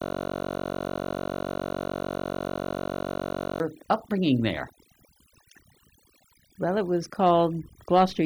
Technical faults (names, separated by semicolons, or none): overdone noise removal; system hang loop